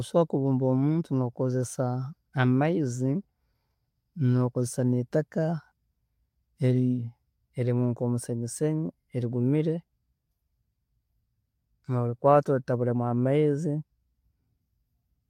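No technical faults can be heard anywhere in this speech recording.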